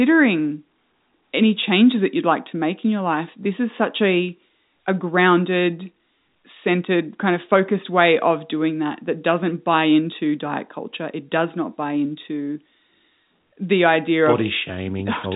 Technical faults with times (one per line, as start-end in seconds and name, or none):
none